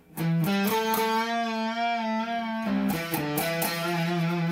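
No faults can be heard anywhere in the audio.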